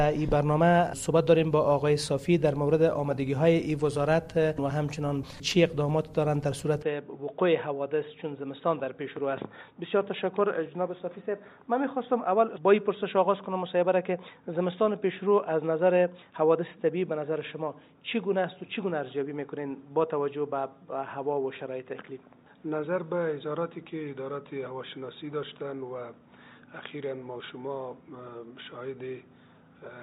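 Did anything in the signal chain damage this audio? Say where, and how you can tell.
Yes. An input switched to a poorer device at 6.83 s, at the device or driver stage: the sound turns dull with nothing above 3.8 kHz, drops about 5 dB and picks up faint new background noise, likely from a lesser microphone taking over without a gap.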